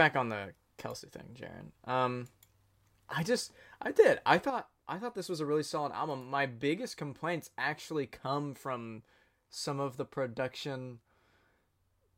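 After "on the" (1.00–1.13 s) and from 4.50 s after "just I did I", the speech abruptly steps down about 6 dB, shrinking the waveform. Likely one channel drops out.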